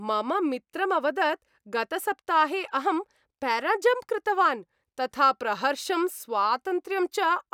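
Nothing technical stands out in this short bit of speech; there's no fault to point to anywhere in it.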